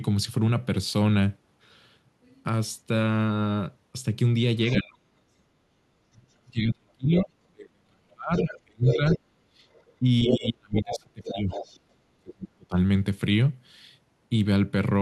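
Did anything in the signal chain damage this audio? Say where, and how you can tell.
Yes. Other side's voice leaking through, at 4.68 to 4.80 s and again from 8.34 to 11.78 s: a second voice sits only about 5 dB below the talker, far too loud for room ambience. This damage happens in call processing. The device is likely playing the far end on a loudspeaker, and the echo canceller failed to subtract that playback from the microphone, so the far-end voice passes straight through into the outgoing signal.

Speech suppressed in double talk, at 4.81 to 5.07 s and across 6.11 to 12.76 s: the talker's level repeatedly collapses, at its deepest by around 40 dB. The first stretch loses roughly 300 ms and the longer one about 4 s in total. Both sides were speaking at once, and the echo canceller likely could not tell the near talker from the loudspeaker echo, so it attenuated everything together.

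Background gated by the echo canceller, at 9.43 to 9.57 s and 11.79 to 11.92 s: the room sound itself ducks, by about 15 dB in the first dip and about 9 dB in the second, each lasting roughly 150 ms before recovering. This is the canceller's suppression stage clamping the microphone while loudspeaker playback was detected and then releasing. The second dip lands just after the leaked far-end voice stops at 11.78 s.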